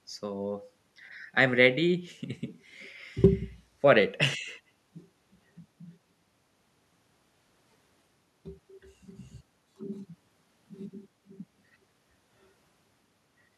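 No technical faults can be heard at any point in the speech.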